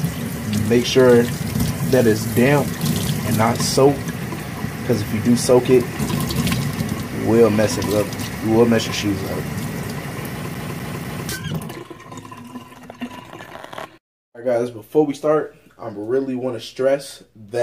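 From 10.55 s to 11.29 s the CD is stuck on one turn: a flaw on the disc surface knocks the laser back a track at the same point of rotation, so playback keeps returning to where it just was. The result is a quarter-second slice of sound, about 248 ms long, played three times in a row, each restart marked by a brief dropout, giving the quick, even, mechanical stutter of a skipping disc.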